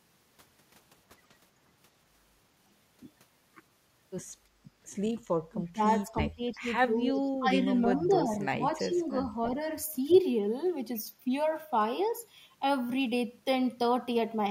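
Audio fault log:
5.50–5.83 s, 6.04–6.68 s and 6.98–9.35 s, speech suppressed in double talk: the speech drops by about 25 dB, then about 20 dB, then about 10 dB in a broken stretch, likely because an echo canceller treated overlapping talk as echo. On the waveform the envelope caves in, and the spectrogram shows gaps with the high end thinned.
7.14 s, 8.96 s and 10.1 s, echo leak: brief scraps of the speech return 333 ms late, at about 35, 30 and then 15 dB below it. The likely cause is a loudspeaker echo the canceller did not fully remove. The spectrogram shows copies of earlier speech harmonics.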